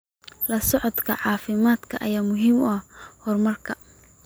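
Nothing stood out on listening to this recording of speech.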